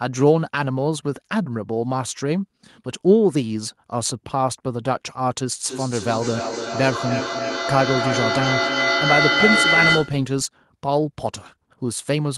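Feedback howl builds in this speech recording from 5.65 s to 10.27 s: a tone near 2 kHz, pulsing about every 300 ms and peaking about 1 dB above the voice. Two devices in one room form a microphone-to-loudspeaker loop with gain, so each pass grows.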